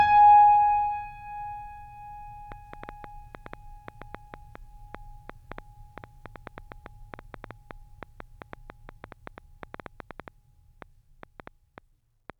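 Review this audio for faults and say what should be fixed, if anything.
A train of clicks runs from 2.52 to 12.31 s, about 50 pulses at roughly 5.5 per second, irregularly spaced, peaking about 5 dB above the music. The cause is likely electrical interference or a faulty connection or power supply injecting pulses. On a waveform they appear as sharp spikes, and on a spectrogram as thin vertical broadband lines. To prevent it, move the recording chain away from interfering equipment and use a stable, properly buffered interface.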